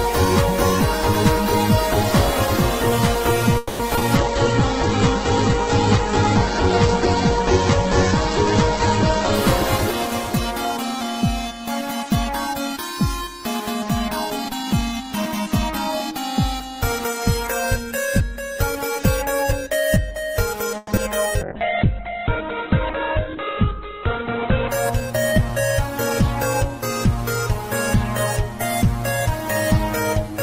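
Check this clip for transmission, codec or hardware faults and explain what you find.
There's quite a lot going on in this one: two stalls, a few concealed packet losses, two stretches of heavy bitrate reduction, and the jitter buffer adjusting its speed in both directions.

Call audio freeze, at 3.57 to 3.81 s and again at 20.77 to 20.90 s. The sound doesn't cut out. The last bit of audio hangs on as a fading buzzy tail, for about 220 ms the first time and 110 ms the second. Then playback resumes exactly where it left off. Nothing is skipped, but the whole call ends up later by that much. The likely cause is packets getting held up in transit, so the jitter buffer ran dry and the receiver had to stretch out what it already had.

Short concealed packet loss comes right after each freeze. At 3.95 and 3.99 s there are two back-to-back 20 ms holes. The decoder papered over each one by carrying the previous sound forward, then crossfading back into the real audio, so you get a quick smear or wobble. 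At 20.96 s it's different: 40 ms went missing but only about 10 ms was filled in. That's a small jump forward that pulls the delay back by about 30 ms, and a short sound could simply vanish there.

Call bitrate drop, from 4.17 to 9.43 s and from 21.42 to 24.79 s. The bandwidth estimate collapsed, so the encoder was told to spend far fewer bits. The first time it went from 48 to 9 kbps and sat at the bottom for about 5.2 s. The second time it fell to 7 kbps for about 3.3 s. Opus also narrowed the audio band, from 20 kHz down to 8 kHz and then to 4 kHz. So the sound goes rough and watery, and in the second stretch noticeably muffled, until the rate comes back.

Jitter buffer speed-up, from 14.09 to 16.0 s at 109% speed and from 25.00 to 26.69 s at 106%. The buffer was holding more audio than it wanted, so the receiver kept snipping out single pitch periods to catch up. Roughly a fifth of a second was trimmed the first time and about a tenth the second. 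Pitch stays put, but the audio sounds a bit rushed through both stretches.

Jitter buffer slow-down, from 21.40 to 21.59 s, right as the second bitrate drop kicks in. Here the buffer was running low, so the receiver repeated little pitch periods to build up a reserve. That added 37 ms and played the audio at 85% speed. It comes across as a slightly drawn-out moment at normal pitch, tangled up with the onset of the muffling.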